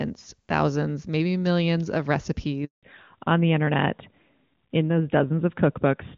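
Speech carried over a mobile call, clearly wideband at first in a way that fits HD Voice at its top AMR-WB rate, breaks off at 2.65 s just after "thousands maybe millions of" with a handover gap. The sound fades within a few tens of milliseconds and stays silent for 180 ms, until 2.83 s. The quick fade and silence until the new link starts set it apart from a dropout caused by packet loss, which tends to stutter or repeat. From 2.83 s to the end, a fallback to narrowband removes everything above 4 kHz, which points to an AMR-NB 12.2 kbit/s link. The speech turns duller and rougher. Because the band is cut off sharply and permanently at the moment of the switch, this is a codec change rather than a gradual low-pass or a fading network.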